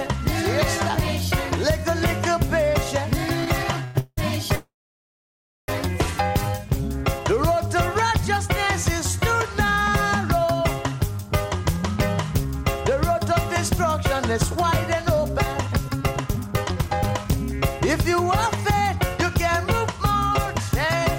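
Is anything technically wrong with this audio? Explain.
Yes. At 3.84 to 3.96 s, 3.99 to 4.18 s and 4.55 to 5.69 s there is a call audio freeze, likely packets stalling so the jitter buffer empties. The last sound is stretched into a fading buzz, falling silent for about 40 ms and then nearly a second, before the audio resumes where it stopped, now running later.

From 10.92 s to 21.06 s a jitter buffer speed-up trims the backlog by repeatedly cutting pitch-period-sized slices, roughly a second in total. The audio plays about 10% faster with unchanged pitch and sounds hurried.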